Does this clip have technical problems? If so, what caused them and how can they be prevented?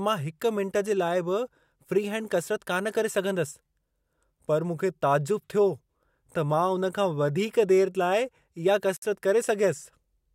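Yes, there's a gap at a join of encoded pieces: speech drops to silence from 8.97 to 9.02 s, about 57 ms, then resumes where it stopped. The pieces were encoded separately, and each one's start-up delay and final-frame padding were kept. Encode continuous audio in one pass, or trim that delay and padding before joining.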